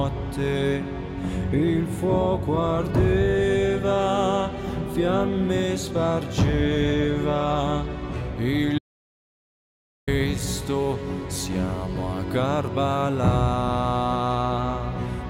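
At 8.79 s the sound stops dead and stays gone until 10.07 s, about 1.29 s of audio dropout to silence. Nothing fades: the signal is simply replaced by silence, with no room tone or hiss underneath, and it resumes just as abruptly. The likely cause is a momentary loss of input, such as a device or link dropping out, while recording carried on. On a waveform it shows as a flat line; on a spectrogram, a fully black vertical band.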